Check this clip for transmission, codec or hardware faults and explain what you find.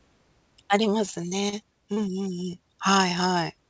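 Two transmission faults show up, both packet loss on a call link. The audio is band-limited with nothing above 8 kHz, which fits a wideband call codec such as G.722 at 64 kbps.

Repeated packet loss (robotic sound), 1.06 to 1.54 s: Four separate gaps land in under half a second, the longest 33 ms. The receiver patches each by extending the preceding audio, filling 83 ms in total, or about 17% of the stretch. Because the patches come back to back, the speech turns choppy, with small pieces missing.

Short concealed packet loss, 1.94 to 1.98 s: A single gap of about 20 ms is bridged with 21 ms of synthesised continuation before the decoder blends back into received audio. It is heard as a brief smear or wobble in the speech.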